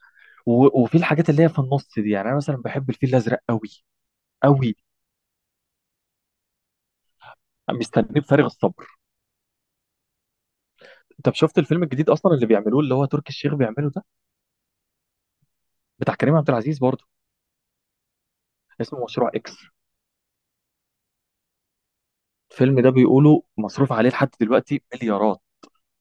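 No technical faults can be heard anywhere in the recording.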